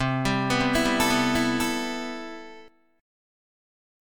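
From 0.60 s to 2.68 s a doubled audio track appears: a full-band copy of the sound runs about 0.7 s behind, roughly 5 dB down, with no decay or room colour. It switches in and out abruptly, likely from a second, slower capture path.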